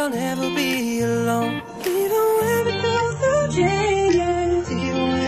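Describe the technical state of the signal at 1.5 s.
At 1.5 s the signal is intact, with no dropout, distortion, glitch or other audible fault.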